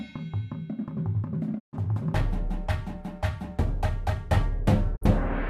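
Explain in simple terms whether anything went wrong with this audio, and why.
Two digital broadcast dropouts: at 1.58 to 1.78 s and 4.95 to 5.06 s the audio fades out over 20 ms, goes silent, then resumes further along. Unlike a loose-cable crackle, there's no noise, just clean muting while the receiver waited for good frames.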